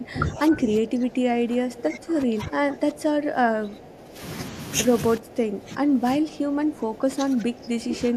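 From the start to 4.21 s, and again from 5.18 s to the end, the speech dips by roughly 15 dB and thins out: speech suppressed in double talk. Both sides were likely talking at once, so the echo canceller mistook this talker for loudspeaker echo and turned it down.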